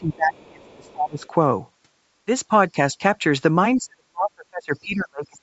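Bluetooth LC3 compression runs through the whole speech clip, and its damage is plainly audible: a grainy, breathy edge sits on the voice, and the upper spectrum has a hissy, noise-filled quality. That is the likely result of a transform codec discarding much of the high band at a modest rate and filling the gaps with noise. The texture points to LC3 at around 48 kbps with short 7.5 ms frames. The band stops near 8 kHz, which is what the call path passes.

Speech suppressed in double talk comes first, from 0.0 to 1.24 s. For roughly a second the talker's voice sinks, at worst by about 25 dB, as if pushed under. This is likely an echo canceller that could not tell its own talker from loudspeaker echo while both sides spoke, so it attenuated everything.

Within that stretch, the other side's voice leaks through from 0.66 to 0.92 s and again from 1.21 to 1.28 s. It is a faint second voice about 35 dB below the talker. 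This residue is likely what remains when loudspeaker playback reaches the microphone and the echo canceller fails to remove it completely.

Lost LE Audio frames follow at 1.73 s, a 15 ms hole that fits two missing 7.5 ms frames. The decoder papered over the gap by repeating the last spectrum with scrambled phase, so the sound briefly turns into a short, noisy smear instead of a clean continuation.

Speech suppressed in double talk then returns in brief dips. The first, from 2.70 to 2.76 s, drops the level by about 15 dB. The second, from 2.93 to 3.02 s, drops it by about 10 dB. The final episode runs from 3.77 s to the end of the clip and is the heaviest. Over roughly a second and a half the voice is pulled down by as much as about 40 dB as the canceller clamps down on both talkers.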